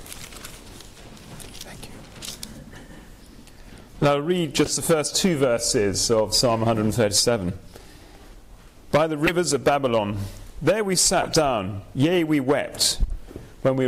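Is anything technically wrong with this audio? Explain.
Yes. Corrupt frames were decoded at 2.73–2.78 s, 4.65–4.71 s, 9.26–9.32 s and 11.22–11.29 s. Damaged compressed frames were played anyway, so energy lands at wrong frequencies. Each is a short chirp or noise burst. The one near 9.3 s is loudest.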